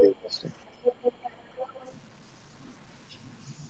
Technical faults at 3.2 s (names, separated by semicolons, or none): low bit depth without dither